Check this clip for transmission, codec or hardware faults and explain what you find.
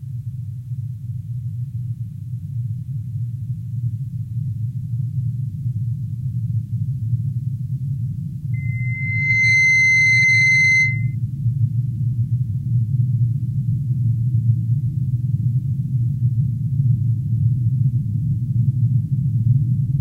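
One fault is present. From 8.53 to 11.15 s, loudspeaker feedback squeal rises at 2.1 kHz. Loop gain there exceeds one. The tone builds over about a second to roughly 5 dB above the sound.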